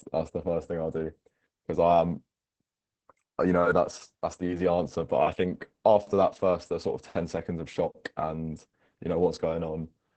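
Opus voice compression runs through the whole clip, start to finish. The coder models the speech with linear prediction, the SILK approach, and codes the excitation coarsely, which fits a bitrate around 10 kbps. The band is wideband, with nothing above 8.6 kHz, so the speech loses its airy top and sounds muffled. The heavy damage makes it hoarse and slightly robotic.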